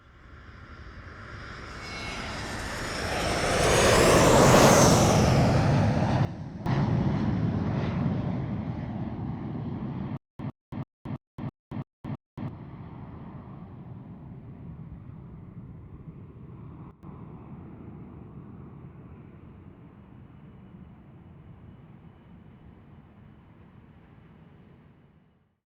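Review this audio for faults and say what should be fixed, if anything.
At 6.25 to 6.66 s and 16.91 to 17.03 s there is a sudden gain jump. The level drops abruptly by about 12 dB and then about 13 dB, with the background falling along with the sound, and then it snaps back. This is likely a digital gain change applied from one sample to the next with no ramp. Apply gain changes with a short fade of a few milliseconds.

From 10.17 to 12.48 s there is a stutter with silent gaps. The same 107 ms burst repeats 7 times, once every 330.5 ms, with about 224 ms of digital silence between repeats. This is likely a stalled stream replaying its last fragment before running empty, so the audio in that span is lost. Increase buffering and handle underruns so playback does not re-emit stale data.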